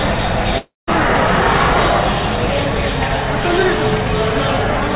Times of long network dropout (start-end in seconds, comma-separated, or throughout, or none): 0.58-0.89